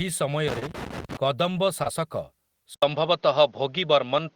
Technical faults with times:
0.48-1.17 loose connector crackle
0.59-0.63 short concealed packet loss
1.83-1.87 short concealed packet loss
2.74-4.36 input switched to a poorer device

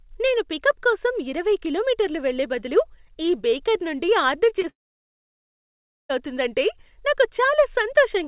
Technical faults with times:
4.62-4.65 short concealed packet loss
4.69-6.11 long network dropout

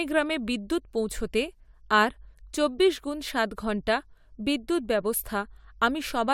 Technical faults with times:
none

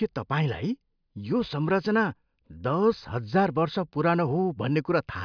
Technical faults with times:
none

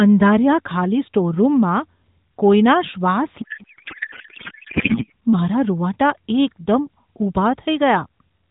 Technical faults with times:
3.42-5.12 codec payload misread

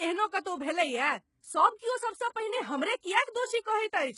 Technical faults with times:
0.00-4.18 HE-AAC compression

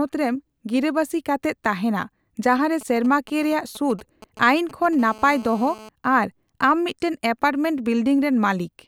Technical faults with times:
2.81-4.95 GSM signalling bursts
4.99-5.89 GSM phone buzz

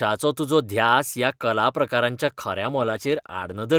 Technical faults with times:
2.62-3.79 call bitrate drop

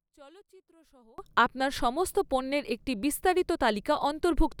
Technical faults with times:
0.00-1.18 one channel inverted

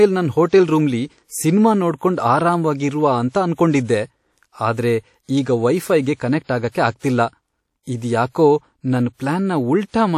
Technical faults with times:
0.00-10.18 WMA compression

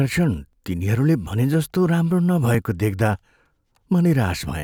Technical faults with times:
0.53 overlapping chunks
1.54 overlapping chunks
2.54 overlapping chunks
3.55 overlapping chunks

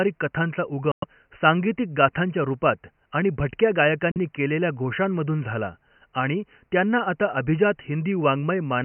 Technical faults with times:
0.91-1.04 Bluetooth dropout
4.11-4.17 Bluetooth dropout

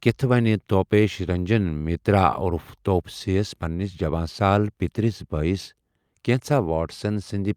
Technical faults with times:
none

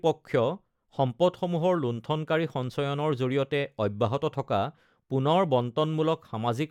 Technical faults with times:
none

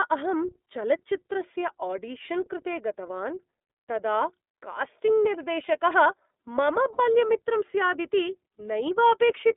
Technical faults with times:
0.00-9.57 iLBC codec
6.93-7.00 lost iLBC frames

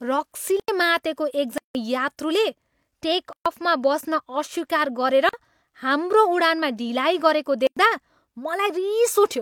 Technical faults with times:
0.60-0.68 block of digital silence
1.58-1.75 block of digital silence
3.33-3.46 block of digital silence
5.29-5.33 block of digital silence
7.67-7.77 block of digital silence

